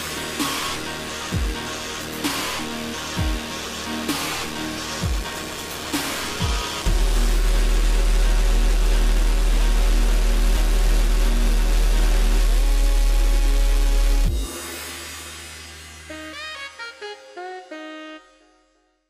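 No technical faults are audible.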